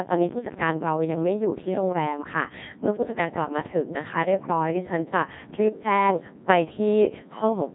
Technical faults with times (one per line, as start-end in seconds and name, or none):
0.00-7.74 Codec 2 vocoder